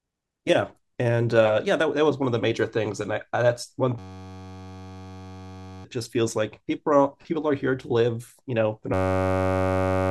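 At 3.99 s the speech gives way to a system hang loop until 5.85 s: the driver stalled while the output hardware kept replaying the same 10.67 ms piece of audio, which fits a 512-sample ring buffer. Repeating at 93.8 Hz, it becomes a steady buzz, and roughly two seconds of speech are lost. The same fault returns at 8.94 s and buzzes through to the end of the clip, replacing about one second.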